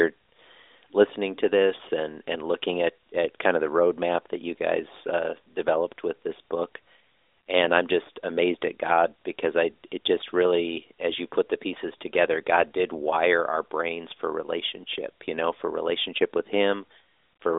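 No technical faults can be heard anywhere in the speech. The AMR narrowband mobile codec path is audible as a telephone band of about 300 Hz to 3.7 kHz with nothing above 3.8 kHz, and its light coloration fits the 12.2 kbps mode.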